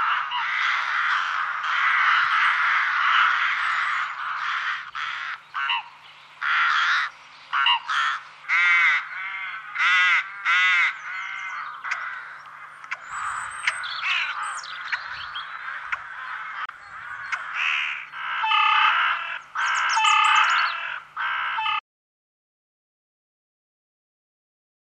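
At 16.66 to 16.70 s a brief glitch cuts through the audio, lasting about 45 ms. This is damaged data in a compressed stream: a short run of the encoded bytes was corrupted, so the decoder misread or rejected those frames, lost its place, and had to hunt for the next valid frame header before it could resume normal playback.

From 21.8 s the sound stops abruptly, mid-flow, and the remaining three seconds or so to the end are silent, with no room tone or background at all. This audio dropout to silence most likely means the input signal was lost, through a disconnected device, a failed link or an accidental mute, while the recorder kept writing silence, so whatever followed that point was never captured.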